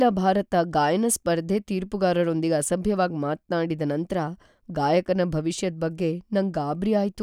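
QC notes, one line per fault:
No technical faults are audible anywhere in the signal.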